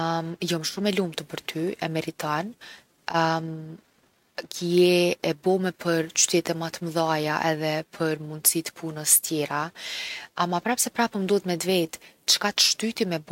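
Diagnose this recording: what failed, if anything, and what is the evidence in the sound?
Nothing in the chain has failed: the speech recording carries no audible defect from any stage between capture and playback.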